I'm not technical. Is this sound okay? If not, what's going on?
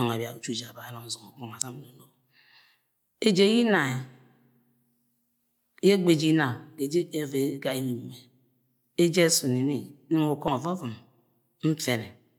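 No. Damaged data in a compressed stream, at 1.62 s and 10.48 s: corrupted bytes confuse the decoder, which briefly loses its place, leaving a tiny chirp or blip in the speech.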